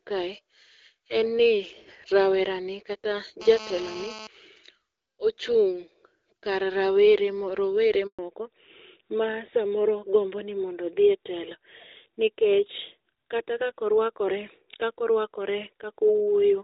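Right after "rawerani kata", from 3.41 to 4.27 s, a hard, raspy buzz at about 217 Hz sits on the speech, roughly 14 dB below it and rich in harmonics. This is GSM phone buzz: a nearby 2G handset's transmit bursts, rectified by the audio circuitry, hold steady as during a call.

At 8.07 s the speech fades within a few tens of milliseconds and falls silent for 120 ms, until 8.19 s. That is a handover gap: while the call was moved between networks, no speech frames arrived, so that stretch of speech is lost.

From 8.19 s to the end, the speech turns duller and rougher, with nothing above 4 kHz. This is a fallback to narrowband. The call left the HD Voice wideband codec, heard before as clear with light coding damage, for a narrowband codec, consistent with AMR-NB at about 12.2 kbit/s.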